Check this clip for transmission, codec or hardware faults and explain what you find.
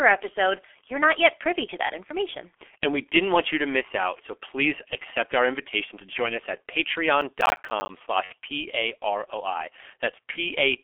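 Three faults are present: a low-rate telephony codec throughout, a burst of crackle, and two short concealed dropouts.

G.723.1 codec, throughout: the speech is coded at about 6.3 kbit/s and confined to a 300 Hz to 3.4 kHz band. It sounds heavily muffled and hoarse, with smeared consonants.

Processor overload crackle, 7.21 to 7.89 s, just after "to join us at": the processor repeatedly missed deadlines for buffers of around ten milliseconds. Each missed buffer left a small silent gap, and a dozen or more of these produce a gritty crackle.

VoIP packet loss concealed by the speech codec, at 8.24 to 8.33 s and 10.31 to 10.38 s: about 60 ms and 30 ms of audio were lost. The decoder extrapolated and faded the missing audio, which is heard as brief buzzy or noisy, weakened sound.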